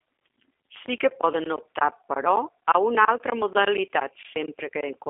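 Speech carrying plainly audible G.729 codec damage throughout: rough, synthetic texture from pulse-based frame rebuilding at what sounds like 8 kbit/s, band-limited to roughly 250 Hz to 3.5 kHz.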